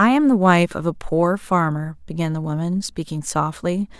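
Nothing in this bit of speech points to a technical fault, so there's nothing to flag here.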